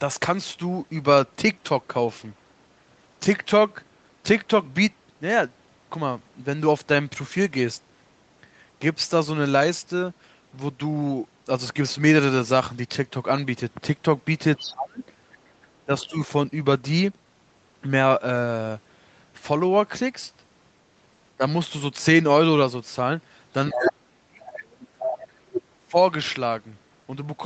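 At 14.56 to 14.73 s a faint second voice, roughly 15 dB under the talker, slips in. This is the other side's voice leaking through, likely loudspeaker echo the canceller failed to remove. Unlike crosstalk from another microphone, it arrives as a short scrap.

From 14.7 to 15.01 s the talker drops sharply, by around 30 dB. This is speech suppressed in double talk, likely the canceller ducking both voices while the far side talks. The same thing happens more gently at 15.85 to 16.16 s and briefly at 21.37 s.

At 23.7 to 23.93 s the leak returns almost as loud as the talker. From 23.72 to 25.96 s, about two seconds, the talker is held down very deeply. A faint echo fragment at 24.47 to 24.56 s and a strong one at 25.0 to 25.16 s poke through the gap.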